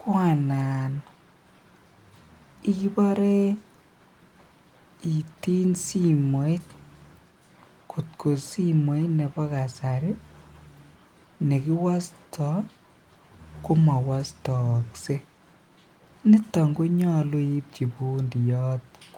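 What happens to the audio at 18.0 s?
Nothing goes wrong at 18.0 s; the speech continues intact through that moment, with no dropout, click or distortion to be heard.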